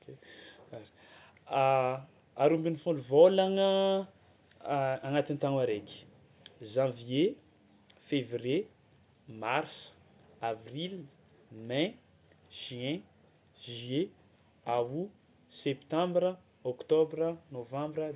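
Nothing stood out as a technical fault when listening through this speech recording.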